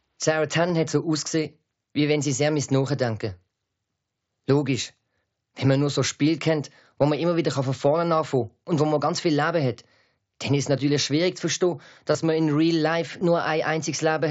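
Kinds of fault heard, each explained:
Concealed Bluetooth headset packet loss: at 0.68, 12.13 and 13.2 s, voice packets between headset and phone went missing for about 15 ms each time, which fits two lost frames. The receiver bridged each hole by repeating the best-matching recent stretch of waveform.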